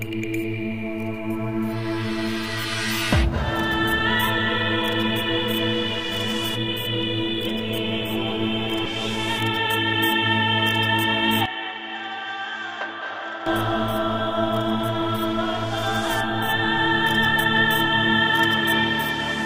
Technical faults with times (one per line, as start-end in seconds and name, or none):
8.85 skip ahead
11.46-13.46 input switched to a poorer device